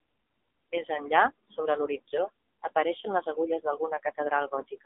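Speech runs through the AMR narrowband mobile codec for its entire length. The line band spans 250 Hz to 3.6 kHz, with nothing above 3.8 kHz. The plainly audible buzzy, synthetic coding texture fits a low AMR-NB mode near 7.4 kbps.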